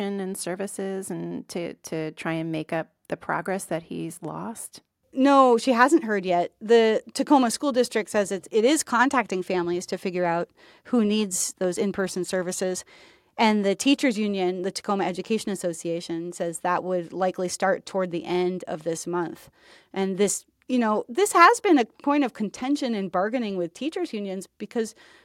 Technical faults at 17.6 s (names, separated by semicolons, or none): none